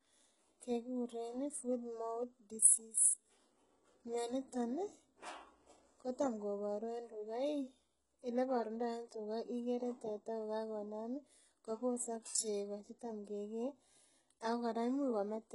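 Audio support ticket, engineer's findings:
Whole clip: speech treble sounds synthetic, s sounds gritty and lispy, nothing above about 11.1 kHz. Likely HE-AAC compression at a very low bitrate, around 12 kbps. Upper band rebuilt from copied lower bands, so harmonics don't line up. Heavy damage.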